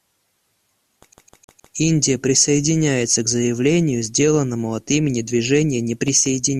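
At 1.13 s the speech catches in a CD stuck on one turn: a 155 ms slice repeats four times until 1.75 s, each pass ending in a brief mute. A scratch is sending the laser back one track on every rotation, giving that fast, even skipping stutter.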